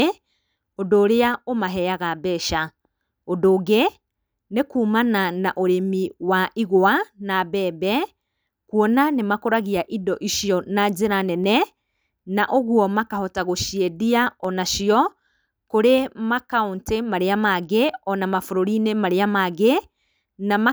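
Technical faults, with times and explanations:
1.34 s and 14.45 s, dropped samples: two isolated sharp clicks in the speech, the second just after "na ũguo makahota gũciendia". Each likely comes from a tiny fraction of a millisecond of samples missing from the stream. The waveform then leaps straight from one value to a later one instead of moving smoothly. That instant step spreads energy across all frequencies at once, so it is heard as a brief tick while nothing audible is lost.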